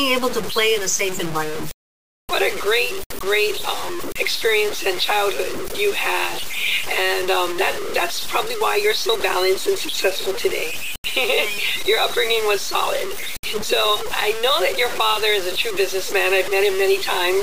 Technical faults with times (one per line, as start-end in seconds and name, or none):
0.00-17.43 low bit depth without dither